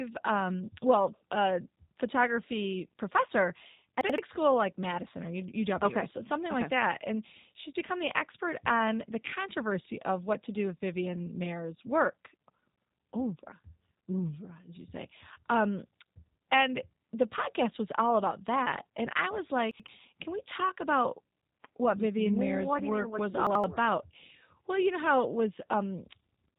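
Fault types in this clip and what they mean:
G.729 codec: low-bitrate 8 kbit/s VoIP coding rebuilds the speech from a vocal tract model, leaving it rough and synthetic with nothing above about 3.8 kHz.
Chunks out of order: 85 ms blocks play one slot late, swapping order, heard as short jumbled moments after "well uh photography professor", "I was" and "what work mean was".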